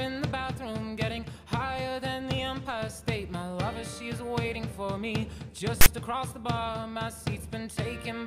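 At 5.81 s, lasting until 5.86 s, a short stretch of file tags played as audio: text metadata decoded as samples. It gives a loud rasp offset to one side with hard edges, unlike a dropout or click, which carries no sustained lopsided buzz.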